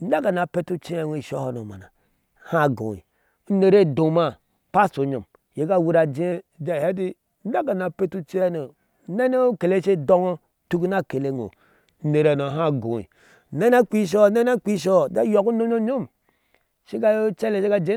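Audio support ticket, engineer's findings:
Drift correction step, 6.32–8.42 s and 11.36–13.62 s: speech drops 6.2% slower and about 111 cents flat (just over a semitone), then snaps back. Likely a clock-sync resampler jumping its rate to rebalance the buffer. Unlike wow, the offset stays steady and switches abruptly.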